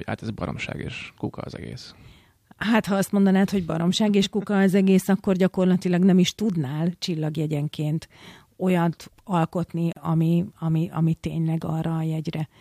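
At 9.93 s, right after "tudnál csillagjegyenként olyat alkotni", the speech drops into a 37 ms gap at a join of encoded pieces. Separately encoded segments were butted together untrimmed, so encoder delay and end padding leave silence. It shows as a blank vertical strip with smeared edges before "ami ami ami" resumes.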